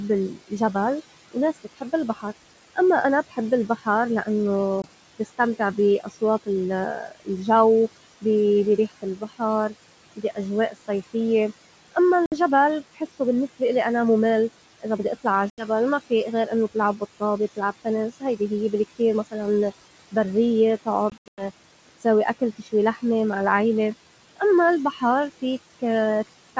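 Speech recorded over a wideband call, with noise suppressor artifacts throughout. The suppressor pulls the background down by about 18 dB, so the noise pumps between and under syllables. The speech cut by the noise suppressor shows up at 0.33–4.27, 5.19–7.28, 8.21–11.96, 12.95–13.61 s (just before "إلي أنا مُمل"), 14.81–23.03 s (ending at "مع العيلة") and 24.37–25.81 s. Soft sounds and endings dip by up to about 18 dB and sound swallowed. Packet loss on an ADPCM call leaves hard-edged gaps at 4.82 s (20 ms), 12.26 s (60 ms), 15.50 s (80 ms) and 21.10–21.45 s, where 200 ms drop out in bursts up to 100 ms long. Each hole is followed by brief slight distortion while the decoder resynchronises.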